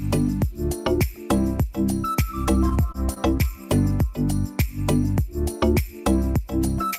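From 2.69 to 3.45 s there is repeated packet loss with a robotic sound. Four gaps fall within that stretch, the longest about 21 ms. Each is filled by stretching the last received sound, concealing 68 ms in all, and the rest, 40 ms, simply drops out. It sounds choppy and robotic. On a spectrogram, short patches show frozen, horizontally smeared bands with abrupt vertical edges. The waveform shows brief repeated-looking segments and small notches where signal vanishes.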